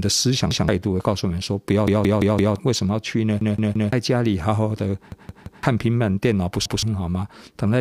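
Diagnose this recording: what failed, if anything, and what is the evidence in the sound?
Repeated buffer at the driver or buffer stage. At 0.51–0.68, 1.88–2.56, 3.41–3.93, 5.12–5.63 and 6.66–6.83 s, one 171 ms slice replays one to four extra times, fitting an 8192-sample buffer. Spectrograms show identical tiled blocks with hard vertical seams.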